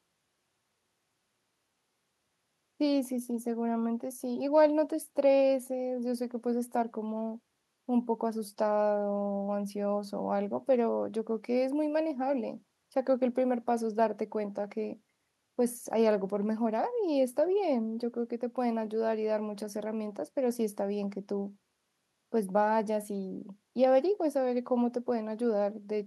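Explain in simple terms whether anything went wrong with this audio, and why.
Nothing stood out as wrong when listening to this speech recording; it sounds the way it should throughout.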